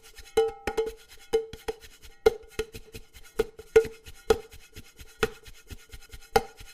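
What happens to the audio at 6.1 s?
At 6.1 s the audio hits an overlapping-chunks fault. It runs from about 6.06 s to 6.26 s. The audio was handled in 3-second chunks, and the new chunk began before the previous one had finished. So 200 ms of sound plays twice at this join. You hear a small jump backward, a brief stutter where the same fragment repeats, often with a click at the seam.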